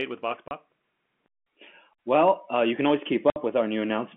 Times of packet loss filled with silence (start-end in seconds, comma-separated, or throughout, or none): 0.48-0.51, 3.30-3.36